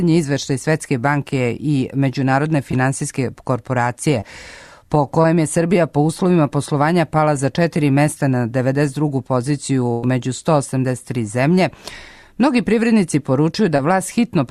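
Short concealed packet loss at 2.71, 4.21 and 5.22 s: each time about 20 ms of audio arrived too late to decode. The receiver extended the preceding sound for roughly 12 to 20 ms, then blended back, leaving a brief smear or wobble.

Burst of packet loss from 9.92 to 10.04 s: about 100 ms went missing in a row. The receiver stretched the last sound across roughly 107 ms while turning it down, giving a held, fading continuation before the audio picks up further on, with that stretch absent.

Short concealed packet loss returns at 13.76 s, another 20 ms gap bridged by a similar brief smear.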